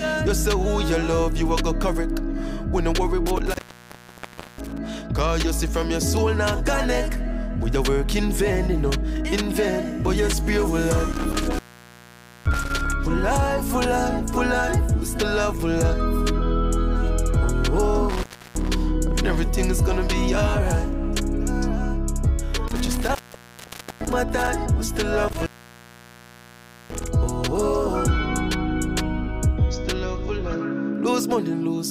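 Intermittent contact breaks the signal five times: 3.26–4.86 s (open about 1.04 s), 11.12–12.92 s (0.87 s), 18.09–18.69 s (0.32 s), 22.68–24.48 s (0.86 s) and 25.28–27.08 s (1.44 s). Each time a loose connection opens, the sound drops out with crackle on either side, leaving faint hiss. The waveform collapses to a near-flat line between spiky edges. The spectrogram shows thin broadband vertical streaks bracketing a dark gap.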